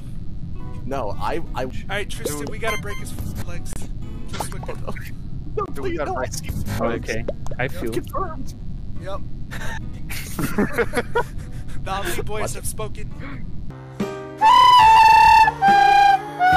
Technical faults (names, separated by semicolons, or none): mains buzz; Bluetooth stall